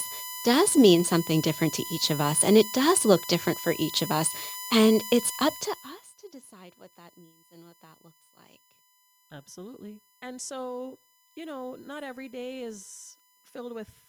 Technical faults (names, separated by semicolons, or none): USB whine